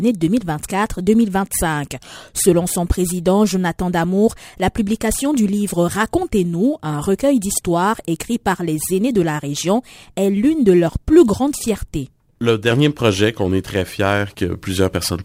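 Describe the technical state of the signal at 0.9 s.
At 0.9 s the signal carries crude rate conversion, which runs through the whole clip. The sound points to a change from 44.1 kHz to 48 kHz done by simply repeating the nearest sample, with no filtering. Because samples are duplicated in a fixed cycle set by the two rates, the timing error adds shifted, inharmonic copies of the sound, heard as a gritty, inharmonic fizz roughly 25 dB below the signal, clearest on loud and high-pitched material.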